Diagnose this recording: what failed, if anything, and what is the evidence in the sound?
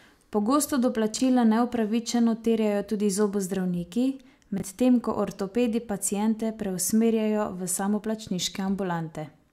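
Chunks out of order at the buffer or network stage: at 1.14 to 1.2 s and 4.58 to 4.62 s, 20 ms blocks of the speech replay two and one positions late, giving brief jumbled moments with hard joins. Unlike a dropout, no sound is missing, only misplaced.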